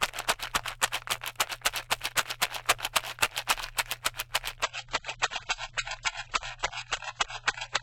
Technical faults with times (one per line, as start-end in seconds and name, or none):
4.63-7.82 adaptive stream at a lower bitrate